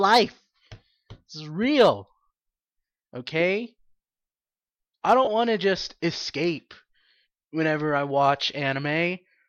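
From 5.25 to 5.27 s, just before "want to just escape", lost LE Audio frames leave a brief noisy smear. The decoder filled the 22.5 ms gap with scrambled repeated spectrum.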